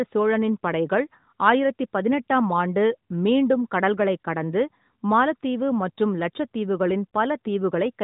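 No technical faults are present in this speech, and its narrow bandwidth, with nothing above 3.8 kHz and only light coding texture that fits the 12.2 kbps mode of the AMR narrowband mobile codec, is the normal character of a mobile call path.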